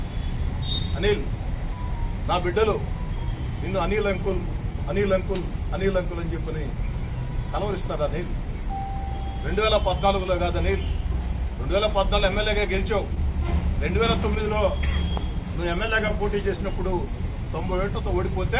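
Throughout the clip the timing wavers slightly, with small hiccups recurring at uneven intervals. This is clock drift between sender and receiver: the sender's clock runs about one and a half percent slow, so the receiver's jitter buffer keeps draining.

From 0.69 s to 18.06 s the pace feels faintly unsteady, with tiny stretches that seem to stall or double. These repeated timing corrections are the receiver repeating short slivers to stay in step, playing at about 99% speed and adding roughly a fifth of a second overall.

Between 13.15 s and 17.38 s, about four brief ticks or smears appear, the longest around 15 ms. These scattered short gaps are lost or late packets, each patched by extending the preceding sound, together covering only a few tens of milliseconds.

Nothing above 4 kHz comes through, which fits the band limit of a 64 kbps G.711 mu-law call path.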